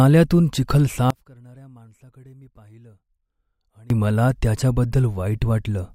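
The signal path likely lost its wanted input from 1.10 to 3.90 s while staying live, an audio dropout to a faint residue: the speech cuts out abruptly, leaving only a faint trace about 25 dB down for 2.8 s.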